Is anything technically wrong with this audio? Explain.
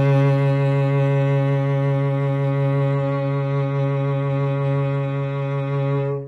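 Yes. From 2.92 s to the end of this music clip, the adaptive stream drops to a lower bitrate. The player switched to a leaner encoding, and the sound fits a fall from about 96 kbit/s to about 32 kbit/s AAC. At that rate the encoder sheds high-frequency detail to save bits, so nothing remains above 9.6 kHz. The treble dulls abruptly, with no gap, and coding artefacts become more noticeable for the rest of the clip.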